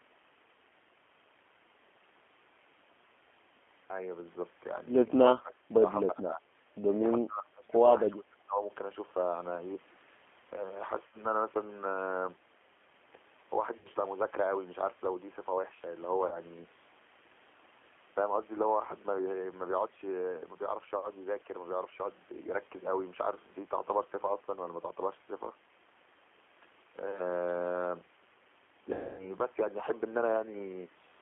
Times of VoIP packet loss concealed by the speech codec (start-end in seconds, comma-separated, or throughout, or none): 11.07-11.22, 13.77-13.89, 16.27-16.40, 28.93-29.35